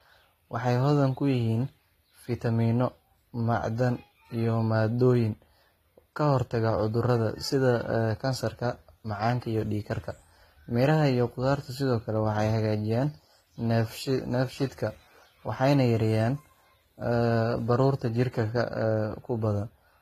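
Transcoding between lossy codecs runs through the whole speech recording: nothing survives above 14.9 kHz, and layered artefacts fit AAC-LC coding stacked on a likely earlier low-rate HE-AAC pass.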